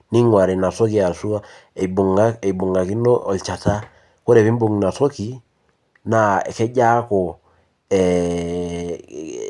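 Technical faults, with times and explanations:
Nothing stood out on listening to this speech recording.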